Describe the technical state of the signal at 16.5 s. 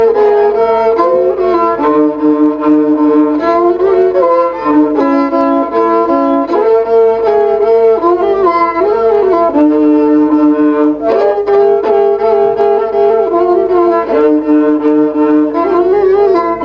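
At 16.5 s the gain is still pumping, with a swing of around 10 dB, so loud and soft passages sit squashed close together. This gain pumping runs through the whole clip. The likely cause is input gain set far too high, with a fast limiter or compressor clamping down on every loud peak and then releasing, letting the noise floor rise again.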